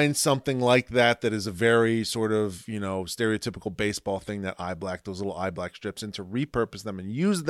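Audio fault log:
No faults are heard anywhere in this speech clip.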